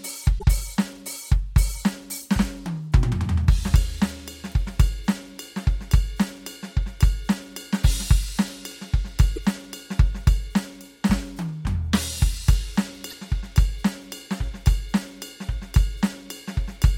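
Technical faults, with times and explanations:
0.35–0.44 s, 9.36–9.38 s and 13.10–13.13 s, damaged data in a compressed stream: short glitches break into the music. Corrupted bytes in the encoded stream make the decoder misread those frames and lose sync until it finds the next valid frame header.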